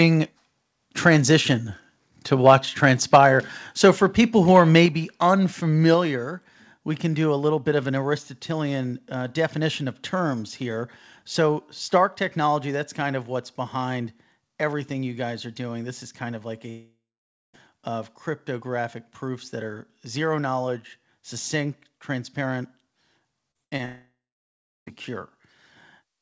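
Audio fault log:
2.46–2.55 s, 3.13–3.26 s, 4.55–4.60 s, microphone overload: the microphone input was likely set too high, so peaks about 3, 6 and 2 dB above the converter's limit were flattened. The first comes just after "transition to", the last after "for people who", and each adds a harsh crackle to the loudest moments.
3.16 s, 4.86 s, 5.94 s, microphone volume stepped down: the call software likely reacted to the clipping by cutting the device's input gain in single steps of about 2, 4 and 3 dB. Each step makes the sound and its background abruptly quieter.
16.70–17.55 s, 23.85–24.88 s, long network dropout: audio likely stopped arriving for about 0.84 s and then about 1.02 s. The receiver stretched the last sound into a fading buzz or hiss, followed by roughly 0.5 s and 0.7 s of silence. The first gap sits between "is kind of like" and "of cryptographic proofs that", and the audio resumes with the lost stretch missing.
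23.51–23.57 s, 23.77–23.81 s, short concealed packet loss: about 40 ms and then 20 ms of data missed the decoder, so the receiver extended the preceding sound and blended back in. Each hole comes through as a brief smear or wobble, and short sounds there can drop out.
23.64–23.73 s, burst of packet loss: about 80 ms of consecutive packets were lost. The receiver held the last sound and faded it across the gap, producing a short decaying buzz or hiss before playback jumps ahead past the missing audio.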